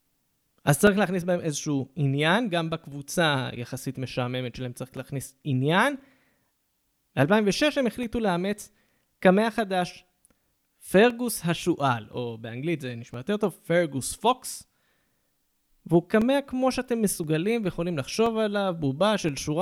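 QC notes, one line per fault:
0.87–19.29 s, periodic USB or driver dropouts: about twenty brief gaps, each around 2 ms of silence, recur every 1.02 s as the driver stalls, heard as regular ticks during the speech. The waveform shows tiny flat notches and the spectrogram shows thin vertical broadband lines.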